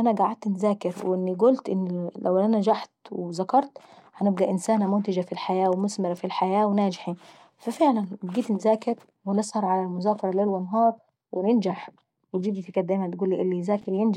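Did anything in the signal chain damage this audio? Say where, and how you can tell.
Yes, at the driver or buffer stage, near the end of the speech at 13.82 to 13.84 s, there are chunks out of order. A tiny slice of the sound, about 5.8 ms long, arrives three chunks late and plays after the material that should follow it. You hear a brief jumbled flutter, with three hard joins. Unlike a dropout, no audio goes missing or silent.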